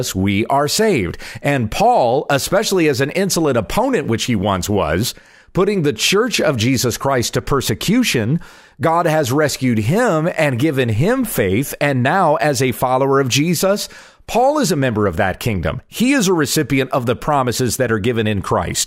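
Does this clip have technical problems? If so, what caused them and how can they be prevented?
No, there's nothing technically wrong to hear in this speech clip, so there's nothing here that needs preventing.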